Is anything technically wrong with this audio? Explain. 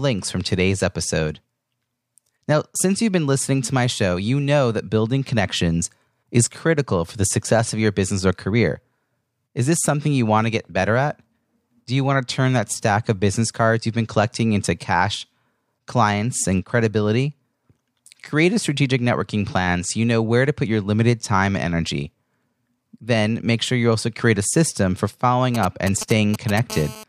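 Yes, a nearby 2G phone is interfering near the end of the speech.

From 25.55 to 26.59 s, GSM signalling bursts appear: the circuit rectifies short groups of radio bursts, producing galloping ticks and brief 217 Hz buzzes roughly 10 dB below the speech.

From 26.70 to 27.04 s, GSM phone buzz takes over: radio bursts sent 217 times a second, consistent with an active call, are rectified into a hard, raspy, harmonic-rich buzz about 15 dB below the speech.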